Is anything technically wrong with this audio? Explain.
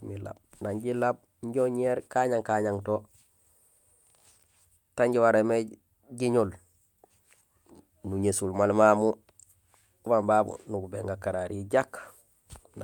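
No, nothing stood out as technically wrong on listening to this speech recording.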